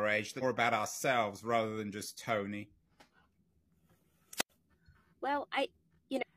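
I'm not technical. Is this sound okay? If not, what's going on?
No. In two places, chunks of the compressed audio were lost or rejected by the decoder as damaged, so they were never played. This is called compressed frames skipped. At 0.38 to 0.43 s, the sound jumps forward by roughly three-quarters of a second, landing on "about ourselves rather than". The same thing happens at 6.18 to 6.23 s.

Separately, the radio link from a wireless microphone faded, and the receiver muted itself instead of passing on pure noise. This is a wireless microphone squelch dropout. From 4.35 to 4.50 s you hear a brief rise of hiss, then a gap of near silence lasting about 0.09 s, and then the speech returns.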